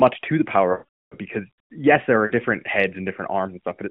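A speech clip over narrowband AMR with lost AMR speech frames: from 0.72 to 1.15 s a roughly 0.4 s run gets concealed, stretching the last sound before fading to silence. A shorter 40 ms loss at 2.26 to 2.32 s gives a brief warbly dip.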